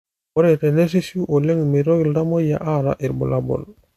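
No technical faults are audible anywhere in this speech recording.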